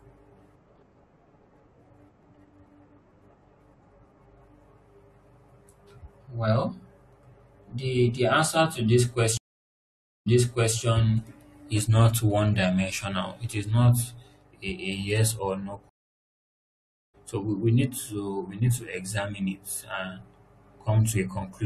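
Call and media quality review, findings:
Stream reconnect, 9.37–10.77 s: connection dropped, player reconnected with fresh decoder; about 0.89 s silence, speech resumes 0.51 s earlier as server resends buffered audio, first frames muted or faded in.

Stream reconnect, 15.89–17.15 s: same drop-and-reconnect; about 1.24 s silence, speech resumes roughly a second later, live position skipped ahead, onset muted or faded in.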